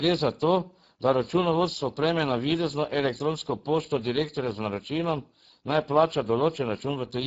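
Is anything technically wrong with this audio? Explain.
Yes, the whole clip carries Speex codec damage, and it's plainly audible from start to finish. Speex is a CELP speech coder, and here it sounds starved for bits, which fits a low setting somewhere around 10 kbps. With so little left to describe the excitation, the speech comes out noisy and hoarse. Nothing reaches above about 7.7 kHz, and the top band that remains sounds more like shaped hiss than real detail.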